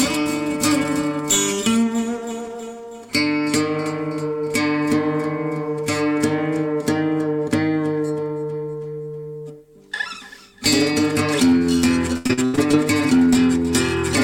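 From 12.17 to 12.75 s the audio breaks into repeated packet loss, giving a robotic sound. Six short holes land in close succession, the longest about 83 ms. Each is patched by stretching the preceding sound, so roughly 44 percent of the stretch is concealment rather than original signal. About 260 ms goes missing in total, leaving a choppy texture with pieces absent until the stream recovers.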